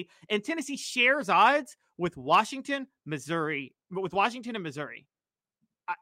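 Listening to this speech recording, nothing stood out as a technical problem.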